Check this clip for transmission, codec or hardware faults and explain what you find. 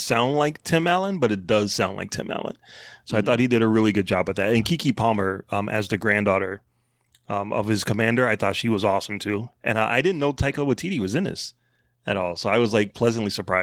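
No transmission, codec or hardware faults turn up anywhere in this speech clip. The Opus voice compression is working as intended, running in hybrid mode at full bandwidth and around 20 kbps, which leaves only the light coding texture expected at that rate.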